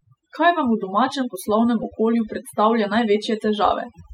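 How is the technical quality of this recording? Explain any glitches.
The recording is marred by overdone noise removal across its whole length. The background drops to an unnatural near-silence dotted with twinkling, chirpy specks. This happens because a noise reduction stage was pushed too hard: it cuts individual frequency bands sharply whenever their level sits close to its noise estimate, so the quieter parts of the speech are stripped away along with the noise.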